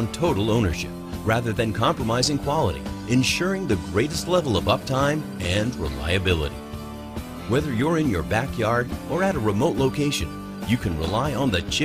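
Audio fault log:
Nothing stands out here; it's a quiet entry for this log.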